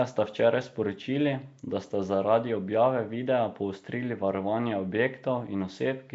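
From start to end, the speech carries a rough, hissy halo and a smeared, underwater blur, with nothing above 7.7 kHz. This is likely Nellymoser compression, whose coarse fixed bit budget, consistent with about 32 kbps, fills starved bands with noise, giving hiss rather than MP3's watery swirl.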